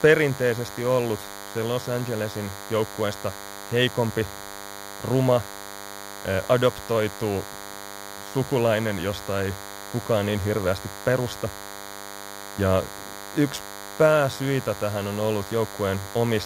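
From start to finish the speech carries DECT cordless phone buzz: rectified 100 Hz radio bursts give a thin, steady buzz, fairly prominent beneath the voice, drawn as evenly spaced harmonic lines on a spectrogram.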